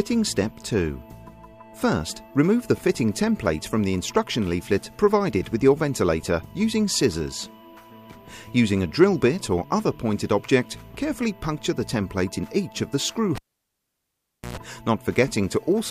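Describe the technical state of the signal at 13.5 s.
At 13.5 s the signal is nearly silent. A pop at 13.35 s cuts the sound off, and the gap runs to 14.57 s, ending with a brief 60 Hz buzz of about 117 ms and a second pop as the audio returns. It is a cable pulled and plugged in. The live lead was yanked out, leaving roughly 1.17 s of dead line. During reinsertion only the plug tip touched the socket at first, picking up mains hum before full contact restored the signal.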